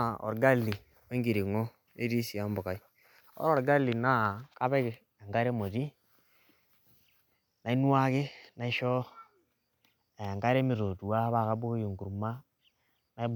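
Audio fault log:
Nothing stood out on listening to this speech recording.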